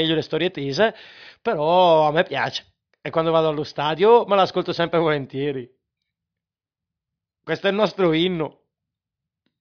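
A speech recording with no technical faults to report. Nothing in it calls for a timestamp or a cause.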